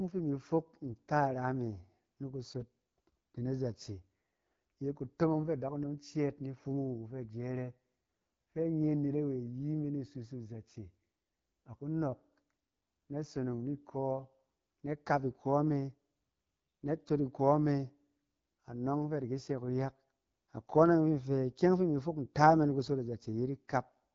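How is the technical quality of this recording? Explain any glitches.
The recording is held back by plainly audible AMR wideband (HD Voice) codec damage that runs through the whole clip. The speech has a rough, raspy grain because the codec rebuilds the voice from a pulse-excited vocal tract model at a very low rate, which fits one of the two lowest AMR-WB modes, around 8.85 kbit/s. Nothing is present above 7.5 kHz. The top band sounds hissy rather than detailed because it is filled with shaped noise instead of real content. Unlike narrowband phone audio, the speech keeps fuller sibilance well above 3.4 kHz.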